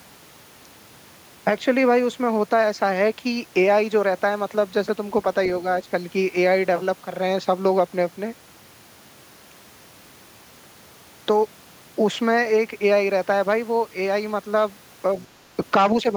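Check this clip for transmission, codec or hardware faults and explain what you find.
Two echo-control faults appear near the end of the speech, both within a quarter second.

From 15.19 to 15.26 s the other side's voice leaks through: a brief, faint scrap, roughly 30 dB below the talker. The cause is likely far-end audio from the loudspeaker reaching the microphone and escaping the echo canceller.

From 15.36 to 15.40 s the speech is suppressed in double talk. The talker's level dips by around 10 dB for about 40 ms. This is likely the canceller mistaking overlapping talk for echo and attenuating everything, heard as a short duck in the voice.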